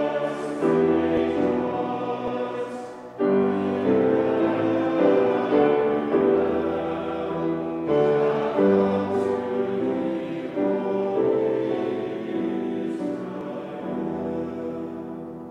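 At 1.17 s the sound jumps forward abruptly, and the same thing happens again at 2.28 s and 13.41 s. Each one skips roughly 10 ms without any gap of silence, so the audio on either side is butted straight together. That's most likely a dropped buffer (overrun): the software didn't pick up a block of samples in time, the hardware overwrote it, and that slice simply vanished.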